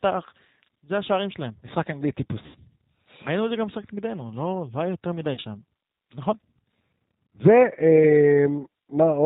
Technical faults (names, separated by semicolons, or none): G.729 codec; VoIP packet loss concealed by the speech codec